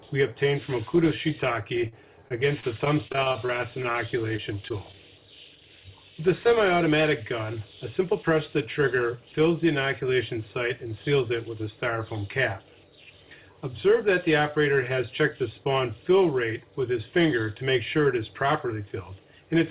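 The audio comes through a band-limited call path with nothing above about 4 kHz, which fits a G.711 mu-law link. From 1.88 to 3.96 s it shows repeated packet loss with a robotic sound: roughly fourteen short holes, the longest about 40 ms, are each bridged by extending the preceding waveform, so around 14% of that stretch is synthetic. Because the patches follow each other closely, the sound turns choppy, with small pieces missing. Shortly after, three isolated instances of short concealed packet loss occur at 4.36 to 4.40 s, 4.68 to 4.72 s and 4.92 to 4.96 s. In each, about 20 ms of audio failed to arrive in time and was filled by continuing the last sound before crossfading back into the real signal. Each one is heard as a brief smear or wobble, and a short transient falling in one of these holes can drop out entirely. From 8.00 to 8.80 s a jitter buffer speed-up is audible. The receiver had accumulated more buffered audio than its target, so it trimmed short pitch-period-sized segments repeatedly, removing about 50 ms in total. 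Playback runs at about 106% of normal speed while the pitch stays unchanged, so this section sounds slightly hurried and its timing is compressed.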